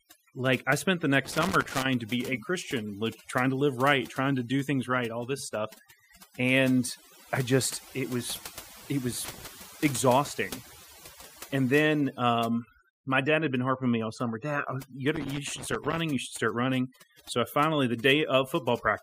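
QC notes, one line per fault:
throughout: overdone noise removal. The noise reduction is set far too hard, so narrow frequency bands that sit close to the estimated noise floor are pulled down or switched off entirely. The quieter parts of the speech fall below that threshold and vanish with the noise, leaving gaps between phrases as near silence flecked with twinkling specks.
1.25–1.88 s, 9.25–9.47 s, 15.16–15.98 s: loose connector crackle. Three irregular bursts of crackle and scratching break into the speech, the first right after "like I spent the" and before "to be a", the second after "just it was it", and the third after "oh you". A worn or dirty contact is making and breaking rapidly, chopping the signal, and any DC present on the line adds sharp pops as the connection flickers.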